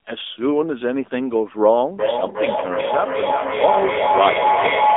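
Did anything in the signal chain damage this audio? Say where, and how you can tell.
Yes. At the codec stage, the whole clip has AMR narrowband mobile codec damage: buzzy, synthetic speech in a 250 Hz to 3.6 kHz band, consistent with a low-rate mode around 7.4 kbps.

In the call path, a feedback howl starts at 1.99 s and runs to the end. It's a tone near 1 kHz, pulsing roughly every 0.4 s and peaking about 1 dB above the speech, as the mic-to-speaker loop keeps gaining level.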